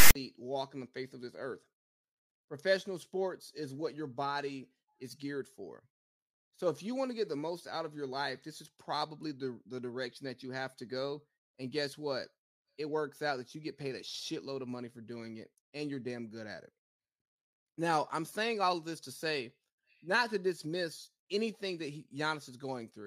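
Right at the top, from 0 to about 0.15 s, you get a case of file tags played as audio. The player reads the metadata block as if it were samples: the text bytes come out as a loud, harsh rasp pushed off to one side, and the zero padding turns into dead silence. You hear it as a short, hard-edged burst of static before the real audio starts.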